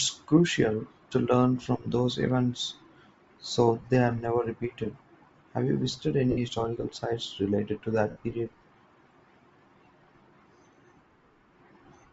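Speech, and the whole clip has a breathy, grainy edge up top, with the high end sounding thinned out and filled with a hiss-like texture rather than real detail. That's most likely Bluetooth LC3 compression running at a fairly low bitrate, where the codec throws away much of the upper spectrum and patches it with noise. The damage is plainly audible throughout, and the codec runs with 7.5 ms frames. On top of that there are three spots of lost LE Audio frames. The first is a brief one at about 3.81 to 3.84 s, roughly 22 ms. Two longer dropouts, each close to 68 ms, come at 6.31 to 6.38 s and 8.10 to 8.17 s. In each gap the decoder keeps replaying the last spectrum with scrambled phase, so the sound turns into a noisy smear instead of going silent, and in the longer two it starts fading down before the real signal comes back.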